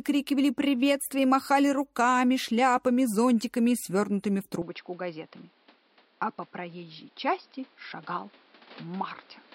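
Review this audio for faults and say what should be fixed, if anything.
From 4.62 s onward, the sound goes dull, with nothing above 5.5 kHz, and gets slightly quieter and noisier. The likely cause is an input switched to a poorer device. Lock the recording input so it cannot change mid-session.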